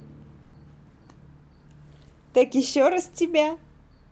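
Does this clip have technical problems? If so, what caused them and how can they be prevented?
Yes. From 0.42 to 0.54 s there is a burst of packet loss: about 110 ms of audio never reached the player in time, and the receiver filled the gap by stretching the last received sound and fading it, so a held buzz or hiss stands in for the missing stretch. When playback picks up again, that 110 ms of speech is gone rather than delayed. The call codec, which sounds like Opus with its band ending near 8 kHz, concealed the gap without dropping to silence. Forward error correction and a slightly deeper jitter buffer on the link would prevent most bursts like this.

Hard clipping appears twice, at 2.37 to 2.42 s and at 2.81 to 2.87 s. The first peak overshoots the available range by about 2 dB and the second only reaches it, so the tops of the waveform are squared off. This adds high harmonics, which are heard as a short crackle on each loud moment rather than continuous distortion. 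Lowering the input gain or adding a few decibels of headroom, or a limiter before the converter, would prevent it.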